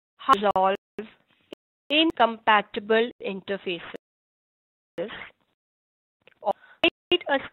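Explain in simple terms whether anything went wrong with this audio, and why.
Blocks of digital silence at 0.51 s, 1.53 to 1.91 s, and 3.11 to 3.21 s: the program likely fell behind and sent out zeros, so the sound drops out abruptly.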